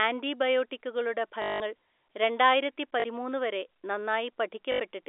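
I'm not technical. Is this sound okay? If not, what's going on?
No. At three moments the speech briefly turns into a robotic, buzzy stutter: from 1.42 to 1.60 s, at 3.00 to 3.04 s, and at 4.72 to 4.80 s. This is packet loss with the last packet repeated. Bits of the phone call went missing, and the receiving end filled each gap by replaying the last fragment until fresh audio arrived. The longest gap lasts 180 ms. The buzz repeats about 50 times a second, which fits 20 ms packets.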